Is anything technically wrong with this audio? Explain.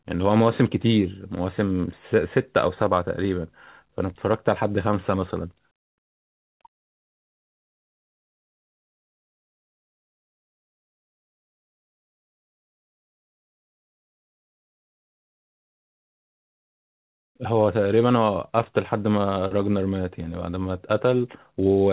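No, nothing is technically wrong with this audio; it comes through a G.711 call path at 64 kbps, which is why nothing is heard above 4 kHz.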